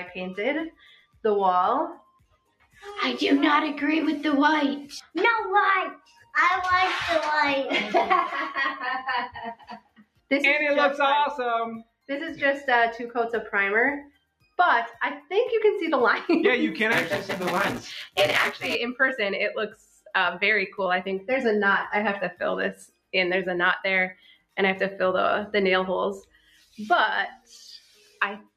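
From the start, a noise suppressor applied to music or sounds is working on the whole clip. It treats held and fading material as noise and turns it down, so the level pumps and breathes over a swing of about 10 dB. A waveform shows an envelope that rises on attacks and then sags unevenly.

From 0.0 to 6.9 s there is channel delay (comb filtering). One channel lags the other by roughly a single sample, and summing them cancels near the top of the audible range, around 20 kHz. The result is a slight dulling of the extreme highs. On a spectrogram this appears as a darkened band along the upper edge that ends at 6.9 s.

Sound cut by the noise suppressor happens at 0.71–2.83, 5.01–6.34, 9.29–10.31, 11.83–12.09, 14.05–15.31, 19.7–20.12, 22.33–24.58 and 26.22–28.54 s. Sustained parts and tails drop by about 18 to 22 dB while onsets survive. The waveform collapses right after each transient, and the spectrogram shows decays cut off abruptly.

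From 16.92 to 18.75 s there is buffer tearing. Writer and reader have slipped within a buffer that appears to be 256 samples. Just under half of each period repeats audio from roughly 10 ms earlier, with hard joins at both ends. This gives a robotic 172 Hz rattle that follows the signal. A waveform shows discontinuities at regular intervals, and a spectrogram shows vertical striations.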